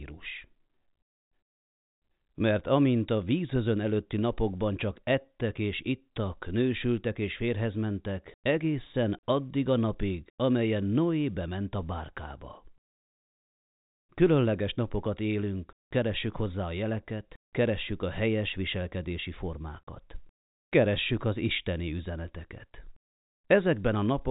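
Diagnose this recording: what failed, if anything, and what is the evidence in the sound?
Nothing in the chain failed.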